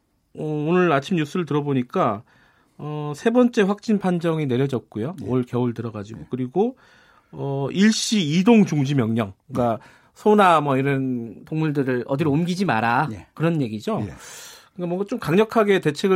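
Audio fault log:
11.26–13.86 s, wrong sample rate: audio played too fast without rate conversion, consistent with 44.1 kHz material sent out at 48 kHz; speech runs 1.09 times faster and 1.47 semitones higher.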